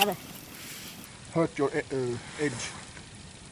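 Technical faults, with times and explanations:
0.00–1.06 s, wrong sample rate: the sound runs 1.45 times too fast and 6.45 semitones too high, which fits 22 kHz material played at 32 kHz.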